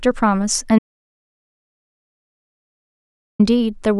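The audio input was likely lost for a stretch, through a disconnected device, a failed link or an accidental mute, while the recorder kept writing silence. In this speech clip that produces an audio dropout to silence: the speech cuts off abruptly at 0.79 s and only returns at 3.39 s, leaving a gap of about 2.6 s of silence with no room tone underneath. Anything spoken during that span is simply missing.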